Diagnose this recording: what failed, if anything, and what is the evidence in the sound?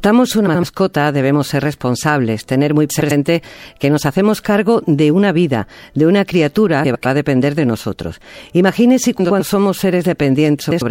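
Frames out of order, at the network or packet-delivery stage. Speech flutters garbled at 0.47–0.64, 2.90–3.12, 6.84–7.06, 9.19–9.41 and 10.60–10.82 s. Two neighbouring runs of frames were swapped. Each stretch plays with its halves exchanged, about 78 ms each first, then 105 ms. No time is lost.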